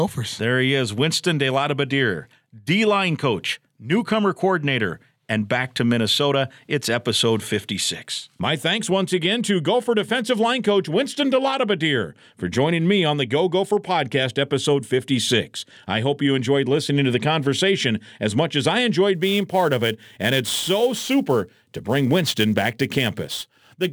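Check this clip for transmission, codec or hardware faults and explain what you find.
One hardware fault is present: sample clock jitter, from 19.14 s to the end at 23.92 s. The converter's clock wanders by roughly ten microseconds. Samples land early or late, and steep, loud speech suffers most. A hiss about 20 dB below the speech rides on it.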